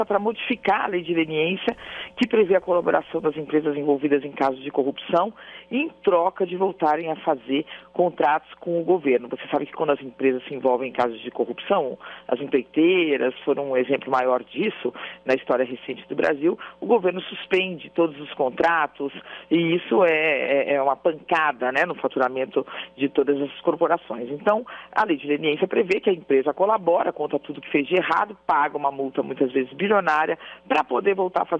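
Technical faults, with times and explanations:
No technical faults detected in this recording.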